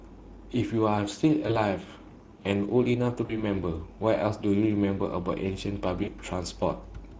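Speex codec damage runs from start to finish. This CELP speech coder has too few bits to rebuild the excitation signal that drives its vocal-tract filter, so the speech comes out noisy and hoarse. The damage is plainly audible, which fits a Speex setting around 16.8 kbps, where the coarse excitation can no longer hide behind the filter shaping.

VoIP packet loss concealed by the speech codec appears at 1.47 to 1.59 s, 3.25 to 3.43 s and 6.03 to 6.10 s. With packets missing, the decoder keeps extending its last pitch and filter while lowering the gain, so the speech smears into a buzzy or coloured, fading tone. The first gap fits one lost 20 ms packet and the later two fit about 40 ms each. Because each frame builds on the previous one, the sound stays weak and distorted briefly after audio resumes.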